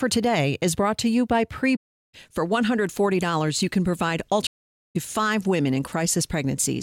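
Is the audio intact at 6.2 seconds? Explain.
Yes, the audio is intact at 6.2 seconds, with no fault to be heard at that moment.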